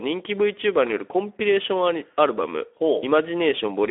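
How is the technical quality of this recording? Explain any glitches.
The technical quality is limited by a single fault that runs through the whole recording. Speex codec damage is plainly audible, and the sound fits a rate of roughly 11 kbps. The CELP coder has few bits left to model the excitation, so speech comes out noisy and hoarse. The line band is about 300 Hz to 3.4 kHz. On a spectrogram, everything above 3.6 kHz is empty and the lows below 300 Hz are thin.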